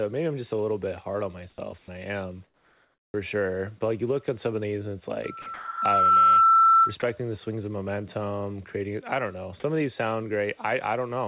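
Comfort noise in place of the background appears from 1.5 to 1.58 s. For these 80 ms the real background gives way to a flat, featureless hiss about 16 dB quieter, likely because the sending side stopped transmitting during a pause and the receiver synthesised a rough imitation of the room noise. It returns from 2.44 to 3.14 s, a longer 700 ms stretch about 7 dB below the surrounding background, where the texture of the ambience is replaced by a steady, smooth noise floor.

An onset clipped by the voice detector follows right at the end of each of those stretches, around 1.56 to 1.58 s and 3.1 to 3.14 s. Sound resumes abruptly, with the first 20 ms and then 40 ms missing, so it starts hard instead of swelling in. The likely cause is a detector that was slow to register returning speech, so the receiver kept filling with synthetic noise until transmission restarted.

Sound dropped by the voice detector occurs from 1.78 to 1.88 s, where 60 ms of speech vanishes into a 100 ms patch of steady noise. 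It recurs at 5.42 to 5.46 s and 5.54 to 5.82 s, losing 40 ms and then 280 ms outright. The sound simply cuts out and comes back, likely because the detector mistook the speech for background and halted transmission.

A loudspeaker feedback squeal runs from 5.24 to 6.95 s. A single 1.3 kHz tone builds over roughly a second until it sits around 15 dB above the speech. It happens because a microphone is picking up its own loudspeaker, and at that frequency the loop gain exceeds one, so the tone feeds itself. The two dropouts inside this span cut into the speech beneath the howl.

Nothing above 4 kHz is present, which fits a narrowband telephone codec on the call path.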